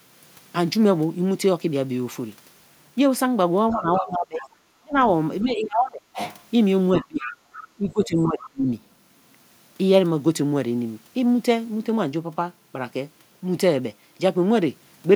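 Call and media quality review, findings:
Other side's voice leaking through: a second, fainter voice under the talker at 3.71–4.05 s, 4.38–4.49 s, 7.01–7.67 s and 8.02–8.50 s, about 15 to 20 dB below the main speech. Likely cause: residual loudspeaker echo the acoustic echo canceller failed to remove from the mic path, so the far end's playback is re-captured and sent back.

Speech suppressed in double talk: talker's voice dips sharply and goes thin or patchy at 3.73–4.99 s (deepest, around 35 dB down), 5.43–6.18 s (around 25 dB), 6.99–7.37 s and 7.77–8.67 s (around 30 dB each). Likely cause: the echo canceller could not separate near-end speech from loudspeaker echo during overlapping talk and attenuated both.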